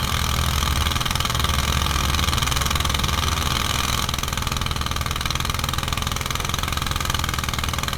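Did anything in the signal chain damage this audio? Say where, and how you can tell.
Yes, there's a doubled audio track up to 4.06 s, where it stops dead. A dry, equally loud copy trails a second and a half behind, likely from a slower second capture path.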